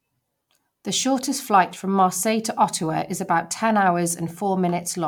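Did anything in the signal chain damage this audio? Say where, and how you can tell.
No, nothing along the chain seems to have left a mark here; the speech comes through without anything that points back to a stage going wrong.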